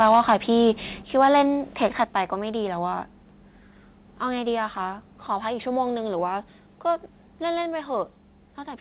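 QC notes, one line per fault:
0.0–0.34 s, 0.6–0.7 s, 1.22–1.42 s and 1.83–2.02 s, microphone overload: the loudest speech peaks sound harsh and crackly with flattened tops, worst in the opening burst. Input volume was likely too high, pushing peaks about 2 to 3 dB past the converter's ceiling.
1.02 s, 2.04 s and 7.62 s, microphone volume stepped down: speech and background drop together in a sudden step, by about 5 dB at the first two and about 2 dB at 7.62 s. This is likely the call software cutting input gain when the microphone ran too loud.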